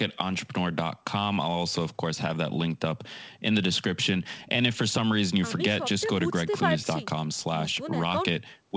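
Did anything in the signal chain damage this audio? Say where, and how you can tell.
No, nothing in the signal chain damaged this audio.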